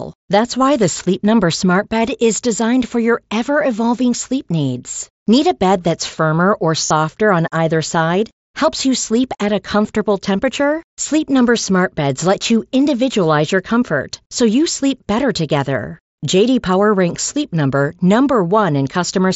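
Speech over a Bluetooth headset link carried by the wideband mSBC codec, with one stretch of concealed Bluetooth headset packet loss from 6.87 to 6.91 s, between "bed that's firmer or" and "on either side." The missing packets, which fit about five lost frames or roughly 38 ms, are filled by repeating the preceding waveform. The result is a short buzzy sustain at full level rather than the silent hole of an ordinary dropout.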